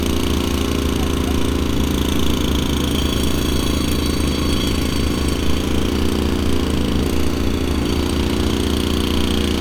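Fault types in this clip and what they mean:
No faults detected: the audio passes without any dropouts, clipping, glitches or other technical defects.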